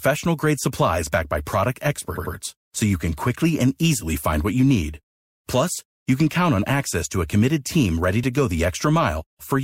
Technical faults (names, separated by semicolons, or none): repeated frames